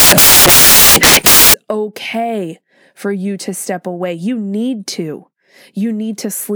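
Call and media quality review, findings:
Samples built from the wrong bytes, 0.00 to 1.54 s. Loud broadband noise over speech, clearing before "okay for you to". Probable component: decoder or file reader. Bytes mis-ordered or offset, so fast-changing low bits dominate each sample value.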